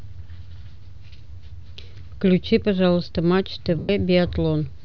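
Speech in which, from 3.79 to 3.89 s, the sound turns into a brief noisy smear that thins out toward silence. These are lost LE Audio frames: about 100 ms of Bluetooth audio went missing, consistent with roughly ten LC3 frames, and the decoder filled the gap by repeating the last spectrum with randomised signs, fading it as the loss continued.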